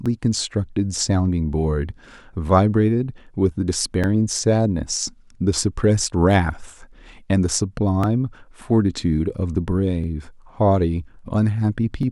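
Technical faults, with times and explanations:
0.06–12.03 s, periodic USB or driver dropouts: a tick every 2.0 s through the speech, about seven in all, where a couple of milliseconds are skipped outright. A background task stalls the USB bus or audio driver at a fixed interval, leaving abrupt waveform jumps.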